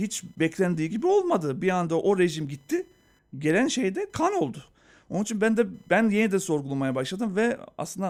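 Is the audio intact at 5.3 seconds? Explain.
No. At 5.3 s, as throughout the clip, computer activity noise is present: a faint buzzing chirp pulsing at around a kilohertz, roughly 45 dB below the speech. Processor and peripheral load changes are disturbing the shared ground of the audio circuit.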